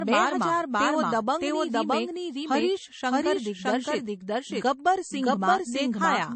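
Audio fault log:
Throughout: doubled audio track. Every stretch of the speech is heard twice. A second, full-band copy trails the first by roughly 0.7 s at about the same loudness, so syllables pile onto later ones and the speech turns into a cluttered, overlapping echo. The copy has no decay or room colour, which rules out a natural reflection. The likely cause is the same signal reaching the mix a second time through a slower capture path, or two copies sitting out of step in an edit.
Throughout: low-bitrate audio saved at a high bitrate. The speech sounds dull and boxed in, with nothing above about 8.4 kHz and the smeared, swirly texture of heavy MP3 compression. The file itself is a high-rate MP3, in keeping with a 192 kbit/s encode. The sound points to a first MP3 encode at a very low rate, around 32 kbit/s. Re-encoding at the higher rate preserved the earlier cut-off and artefacts but could not restore the detail the first encode discarded.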